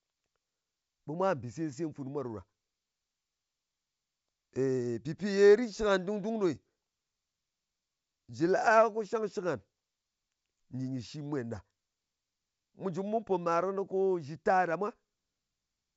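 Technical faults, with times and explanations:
Nothing stood out on listening; the speech comes across as ordinary G.722 wideband telephone audio at 64 kbit/s.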